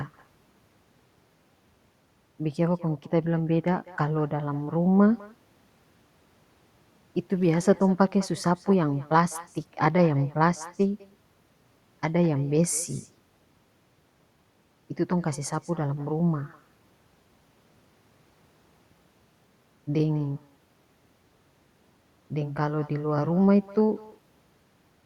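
Across the whole speech recording, every phrase is trailed about a fifth of a second later by a faint, thin copy, about 23 dB below the talker. This is echo with no canceller: the far end's loudspeaker output reaches its microphone and returns uncancelled after the network round trip.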